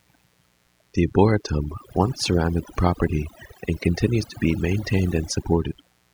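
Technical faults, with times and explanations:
Throughout, mains buzz: a steady, raspy buzz sits under the speech, built on 60 Hz with sharp switching spikes twice per cycle, so harmonics stack up well into the kilohertz range. It sits roughly 15 dB below the speech.
Throughout, overdone noise removal: the noise reduction was pushed way too hard, clamping down individual frequency bands whenever they looked like noise. The quieter parts of the speech got eaten too, with twinkly specks in the gaps.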